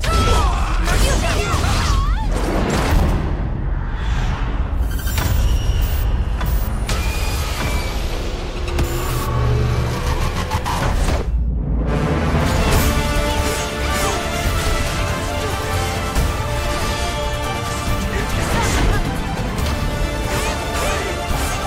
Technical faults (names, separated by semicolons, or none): none